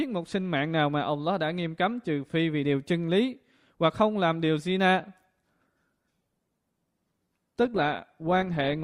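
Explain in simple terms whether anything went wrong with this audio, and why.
From 5.63 s onward the speech suddenly sounds more artificial, with no gap: an adaptive stream at a lower bitrate, switched down as the connection slowed.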